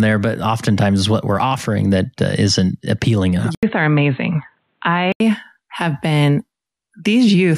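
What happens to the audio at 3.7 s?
The input likely switched to a poorer device at 3.55–5.20 s: an 80 ms gap, then dull sound with nothing above 4.2 kHz.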